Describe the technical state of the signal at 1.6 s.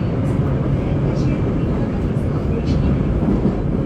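At 1.63 s the signal breaks up with damaged data in a compressed stream, lasting until 1.67 s, about 44 ms. Part of the encoded data at that point is corrupt. The decoder cannot read those frames correctly. It loses its place in the stream and hunts for the next valid frame header before normal decoding resumes. The result is a short, harsh blip or chirp that cuts abruptly into the sound.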